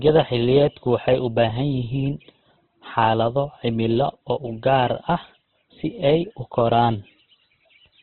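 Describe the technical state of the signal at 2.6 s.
At 2.6 s the speech carries heavy Opus compression damage, which runs through the whole clip. Nothing is heard above 4.4 kHz, so the sound is narrowband and dull, and voiced tones come out rough, grainy and noisy. The likely cause is a music-mode (CELT) encoder at a rate around 12 kbps, keeping each band's energy but filling starved bands with folded or noise content. That grain, rather than the swirling spectral holes of MP3, sets it apart.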